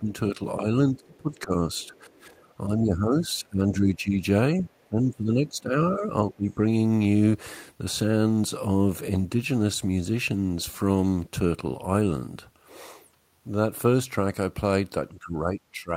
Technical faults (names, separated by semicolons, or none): speech suppressed in double talk; other side's voice leaking through